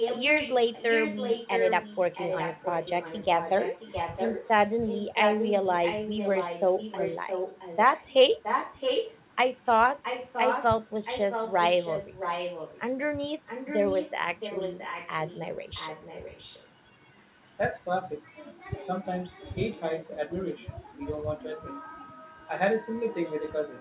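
From the start to 9.15 s, then 10.02 to 12.81 s, 13.46 to 16.67 s, and briefly 19.05 to 19.55 s, there's an echo leak: a second copy of the speech trailing about 0.67 s behind, likely from a loudspeaker on the far end whose echo canceller let it through. It's strong early on, about 5 dB under the speech, drops to about 10 dB down, and is faint, about 25 dB down, by 19 s.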